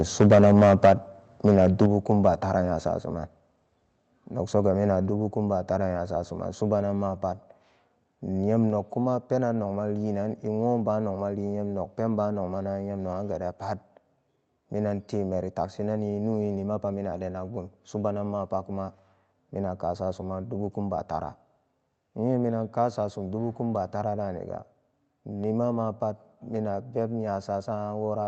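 From 0.2 to 0.93 s the input gain was likely set too high, pushing peaks about 8 dB past the converter's limit. This microphone overload squares off around seven percent of the waveform, so the loudest syllables turn harsh and crackly.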